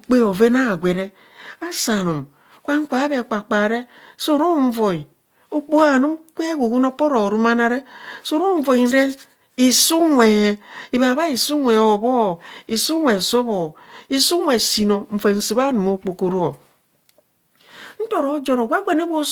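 Speech runs the full 19 s with plainly audible codec damage throughout: voiced sounds come across rough and grainy, with a noisy, fizzy texture where harmonics should be clean. The bandwidth stays wide, extending to about 20.2 kHz, so nothing sounds muffled. The likely cause is Opus compression in its fullband music (CELT) mode at a low rate, which fits roughly 24 kbps, where starved bands are filled with folded or noise-like energy.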